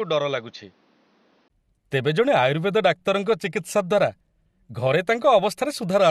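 From 0 to 1.5 s the speech sounds dull and boxy, with nothing above 6.6 kHz. It is a few decibels quieter, over faint added background noise. The input was likely switched to a poorer device. A brief gap at 1.5 s marks the change back.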